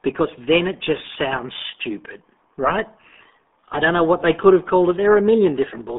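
From start to finish, the speech carries the sound of the RealAudio 14.4 codec. Everything sits in a narrow band from about 200 Hz to 3.6 kHz, and nothing passes above 3.8 kHz. The codec damage is heavy. The voice is muffled and gargly. Sibilants lose much of their hiss. That thin, gurgling texture points to a very low bitrate, around 8 kbit/s, built for dial-up modems.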